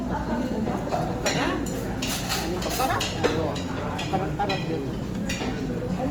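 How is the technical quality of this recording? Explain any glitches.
The recording has plainly audible compression damage from start to finish. The texture throughout points to Opus compression, likely in its CELT music mode at a low bitrate, roughly what a 24 kbps stream would give. When bits run short, the encoder preserves each band's overall energy but refills the detail with folded copies of lower bands or with noise. Tonal parts therefore come out rough, grainy and noisy rather than clean. MP3 damage would instead leave spectral holes that swirl and warble, and that swirl is largely missing here. The top end also stays fullband instead of sounding muffled, which rules out Opus's narrower speech mode.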